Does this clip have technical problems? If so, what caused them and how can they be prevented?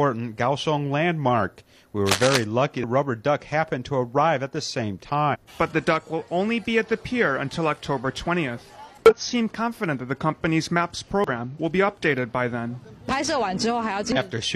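Yes. Cable scratch noise, 2.06 to 2.44 s: a rough, uneven burst about as loud as the sound, likely from a worn connector or cable whose contact resistance jumped while moved. Replace or clean worn leads and connectors, and keep cables still while recording.

Damaged data in a compressed stream, at 2.79–2.84, 5.30–5.37, 9.06–9.13, 11.24–11.30 and 14.12–14.18 s: brief glitches where the decoder hit corrupt frames and lost sync. Use a reliable connection or storage and verify file checksums after transfer.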